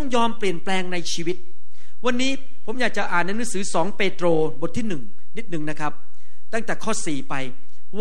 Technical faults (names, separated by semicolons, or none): DC offset